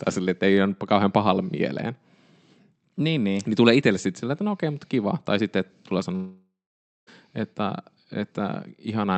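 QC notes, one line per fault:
6.15–7.09 s, long network dropout: after "sitten tulee" the last sound smears into a fading buzz, then about 0.55 s of silence, and the speech resumes with roughly 0.92 s lost, likely a stalled stream. Unlike brief packet loss, concealment runs out and content is skipped, not delayed.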